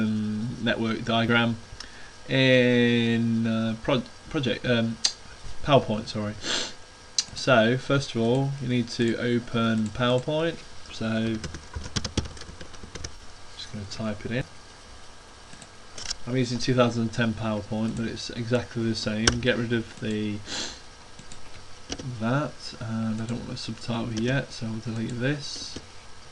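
At 13.15 s to 13.20 s there is AAC frame loss with concealment. About 43 ms of coded audio went missing, which fits two lost frames. The decoder rebuilt the gap from the last good spectrum. It comes through as a brief smeared, noisy patch.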